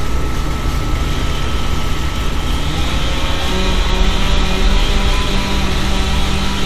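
No technical faults can be heard in this recording.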